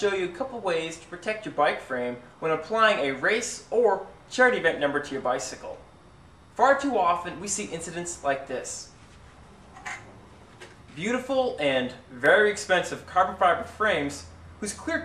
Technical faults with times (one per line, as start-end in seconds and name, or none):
12.26 block of digital silence